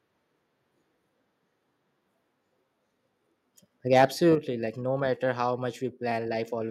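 From 3.93 to 4.05 s, the loudest speech peaks turn harsh and crackly. This is microphone overload. The peaks run about 5 dB past the converter's ceiling, so their tops are sliced flat. The likely cause is input volume set too high.

At 4.35 s, the microphone volume is stepped down. Speech and background both drop by about 7 dB at once. It follows the distorted peak closely. The call software likely caught the clipping and cut the input volume in one move.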